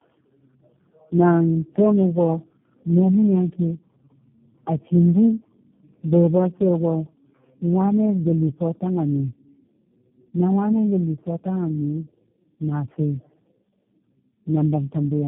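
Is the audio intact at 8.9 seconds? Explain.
No. Tandem speech coding runs throughout, including 8.9 s. Several low-rate speech codecs likely recoded it in turn, compounding roughness and warble, with nothing above 3.8 kHz.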